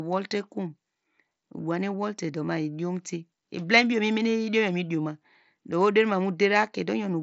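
No technical faults occur in this speech clip, which comes through a Bluetooth mSBC headset codec with nothing above about 7.7 kHz.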